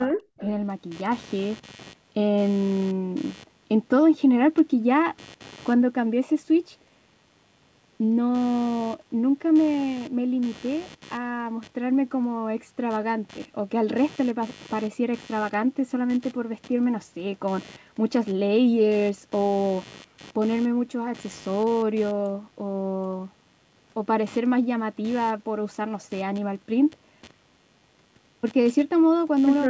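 Right from the start, 0 to 0.23 s, the speech dips hard, by something like 35 dB. That's speech suppressed in double talk, likely the echo canceller ducking the talker along with the loudspeaker echo. Then at 0.37 to 0.42 s a faint copy trails in about 200 ms late, roughly 25 dB down: an echo leak, probably loudspeaker pickup the canceller missed. Under the whole clip there's a buzzy computer activity noise pulsing around a hundred times a second, about 25 dB below the speech, from load changes on the shared ground.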